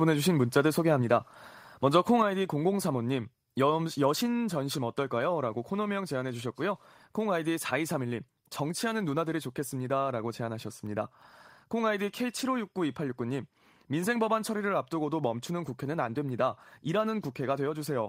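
At 1.02 s the speech and the background beneath it drop together by about 2 dB, and at 2.22 s they fall again by about 4 dB. Each is an instant step rather than a gradual ride, which points to a microphone volume stepped down, most likely the call software cutting the device's input volume. A smooth automatic gain control would ease the level down, and a compressor would dip only on loud moments and recover.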